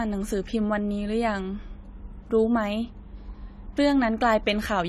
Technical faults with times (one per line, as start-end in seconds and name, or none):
0.00-4.88 AAC compression